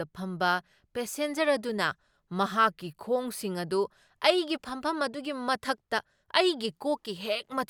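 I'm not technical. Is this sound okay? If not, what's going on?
Yes, nothing wrong turns up anywhere in this speech recording.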